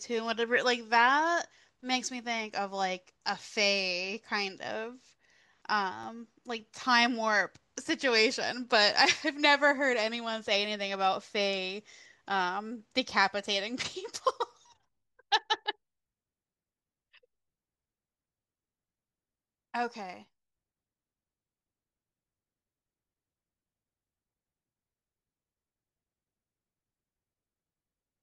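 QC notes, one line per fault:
5.82–6.25 s, CD scratch ticks: a blemish on the disc destroyed more data than error correction could rebuild on successive turns, so the player patched over the damaged samples, leaving three brief ticks in the speech, the longest well under a millisecond.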